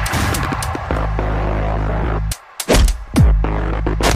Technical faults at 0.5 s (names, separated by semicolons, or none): loud pop